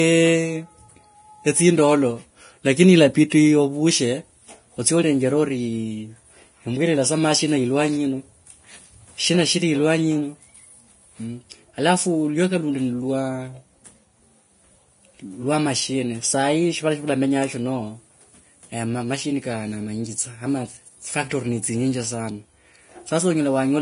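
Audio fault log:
Throughout: low-bitrate audio saved at a high bitrate. The speech has no content above about 10.5 kHz, a hard ceiling that a file encoded at a high bitrate would not impose. The dull quality of the voice fits an earlier low-bitrate encode, most likely a Vorbis pass at around 30 kbit/s, later re-encoded as MP3 at 192 kbit/s. The larger MP3 keeps the first codec's losses and its cut-off; it cannot restore what was discarded.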